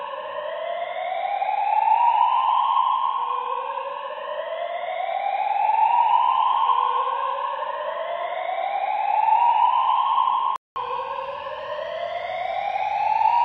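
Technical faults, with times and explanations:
0.0–10.76 s, input switched to a poorer device: the sound is dull and boxy, with nothing above 3.9 kHz and a new noise floor about 40 dB down. At 10.76 s a 200 ms gap precedes full bandwidth at the same level. That gap and the changed noise point to a likely device change, not a filter.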